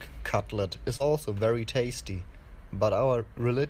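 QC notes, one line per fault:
0.97–1.02 s, short concealed packet loss: About 20 ms of speech did not reach the decoder in time. The receiver covered the hole by carrying the preceding sound forward for roughly 24 ms, extending its pitch if voiced or substituting shaped noise if not, and then crossfaded back into the real signal. The result is a brief smear or wobble in the speech rather than a silent dropout, with the extra few milliseconds spent on the blend back in.
1.00–1.02 s, lost packet rebuilt from error correction: Within the same window, about 20 ms was restored from the low-bitrate redundant copy that Opus in-band forward error correction carries in the following packet. This points to a single lost packet. Because the decoder played that reduced-quality copy instead of the original frame, there is no gap, but this stretch sounds rougher and noisier than the speech around it.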